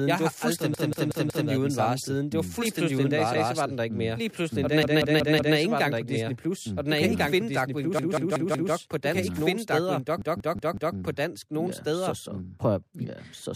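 Repeated buffer stutters break up this speech recording at 0.74 to 1.49 s, 3.34 to 3.53 s, 4.83 to 5.57 s, 7.99 to 8.73 s and 10.22 to 10.96 s. In each, a slice of about 186 ms sounds again and again with a hard join at every restart, four extra times in most places and once at 3.34 s. The device ran short of fresh audio and replayed its last block, which fits an 8192-sample buffer. A doubled audio track runs throughout. A second full-band copy of the speech trails the original by about one and a half seconds at roughly the same level, with no decay or room colour. It likely comes from the same signal being captured a second time through a slower path and mixed back in.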